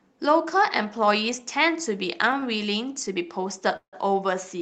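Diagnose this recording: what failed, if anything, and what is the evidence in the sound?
Network stage, at the jitter buffer. A short stall from a late packet at 2.40 to 2.44 s. The last sound is held 22 ms, then resumes.

A call audio freeze from 3.76 to 3.95 s. The sound buzzes on, then falls silent for 100 ms. Likely cause: delayed network packets.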